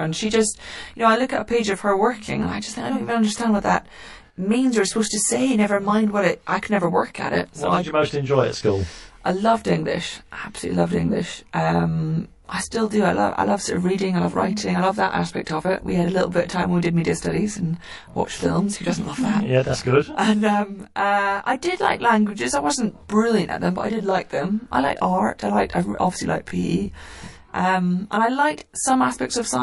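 Throughout the speech, channel delay (comb filtering) is present: one channel arrives about 20 ms late, and the mono sum cancels at evenly spaced frequencies from around 20 Hz, sounding rough or slightly doubled.

Also throughout, the sound is watery and swirly, with chirpy sibilants. This is likely MP3 compression at a low bitrate around 48 kbps.

At 15.45 s, between "writing I love that" and "of it", pre-echo puts a short hiss about 11 dB up, spread over 15 ms, before an attack. This fits a long transform block without switching to short blocks.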